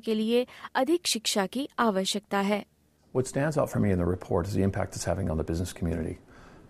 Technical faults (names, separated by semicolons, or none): video or display buzz